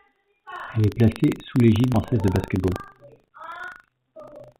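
Throughout the speech, buffer tearing occurs: the playback writer and the hardware read pointer cross every 40 ms, splicing in a small slice of audio about 70 ms old, heard as a steady 25 Hz rattle. At 1.94 to 1.96 s, a skip ahead occurs: roughly a second of speech was dropped while later audio waited, so playback jumps forward with no gap. From 2.12 to 4.55 s, a jitter buffer speed-up trims about 300 ms of pitch periods to reduce delay, so the speech runs at 113% speed at unchanged pitch and sounds hurried. Over the G.711 call path nothing is heard above 4 kHz.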